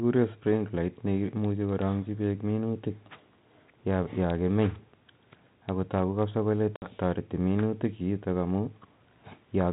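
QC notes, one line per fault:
6.76 to 6.88 s, packet loss on an ADPCM call: about 60 ms of audio drops to hard-edged silence, the length of a few packets, then the sound resumes with brief, slight distortion. The 32 kbit/s G.726 stream carries only differences from an adaptive prediction, so after the gap the receiver's predictor and step size no longer match the sender's and take some tens of milliseconds to realign.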